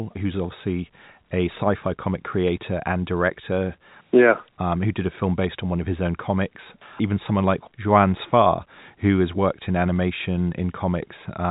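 Nothing goes wrong in this bit of speech; it simply carries the familiar narrow band of G.711 telephone coding, with nothing above about 3.8 kHz.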